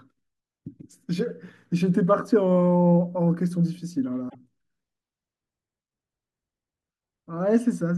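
A brief glitch breaks into the speech at 4.26 s and lasts until about 4.35 s, roughly 90 ms. This is damaged data in a compressed stream: a stretch of the encoded file or stream was corrupted, so the decoder misread the frames there, lost its place in the bitstream and had to hunt for the next valid frame header before clean decoding could resume.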